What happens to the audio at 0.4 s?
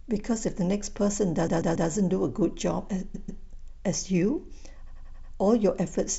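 Nothing goes wrong at 0.4 s; the speech there carries on intact, with no dropout, click or distortion.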